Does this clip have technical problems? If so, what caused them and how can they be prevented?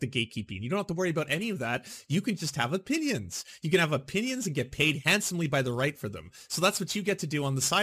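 Yes. Crude rate conversion runs from 1.17 s, just after "don't have to worry", to the end. Samples are repeated without filtering, which fits a 44.1 kHz to 48 kHz conversion. This leaves an inharmonic gritty fizz roughly 20 dB below the speech. Prevent it by resampling with a proper band-limited, anti-aliasing converter.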